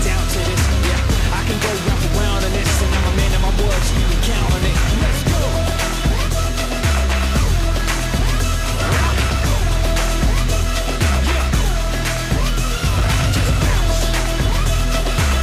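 Nothing goes wrong anywhere in this audio, so there's no technical fault to point out at any moment.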